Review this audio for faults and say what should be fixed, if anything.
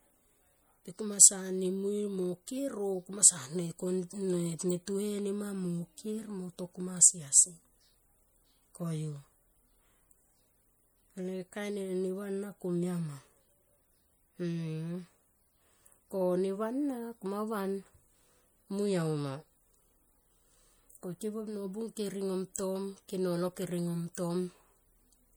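Plainly audible MP3 compression damage runs throughout the speech, with a watery, swirling texture as weak frequency lines drop in and out between frames. The bandwidth still reaches about 21.1 kHz, and the damage likely points to a bitrate around 64 kbps. Encode at a higher bitrate or keep a lossless master.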